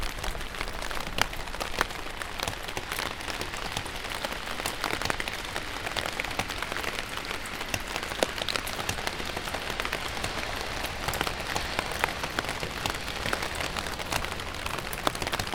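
A recording of sounds breaks into three bursts of gritty, tearing crackle, from 0.74 to 1.41 s, from 4.17 to 4.94 s (the longest, with the most misses), and from 9.25 to 9.52 s. This is processor overload crackle: the processor repeatedly fails to deliver its audio buffers on time, and each miss drops in a sliver of silence with hard edges. The tiny spacing of the clicks points to a very short buffer, under a millisecond, with dozens of misses in each burst.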